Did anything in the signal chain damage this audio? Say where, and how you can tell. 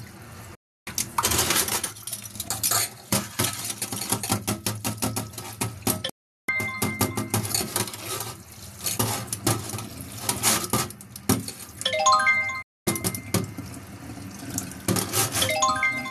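Yes. The audio drops to silence three times, from 0.55 to 0.87 s, 6.09 to 6.49 s and 12.62 to 12.87 s. Each hole opens with a very quick fade of about 8 ms rather than a hard click, and the sound resumes further on with the missing stretch simply gone. That is a digital broadcast dropout at the reception stage: the receiver lost the signal or rejected corrupt frames and muted until clean ones arrived. The gaps of 312, 384 and 240 ms fit whole frames of about 24 ms being thrown away.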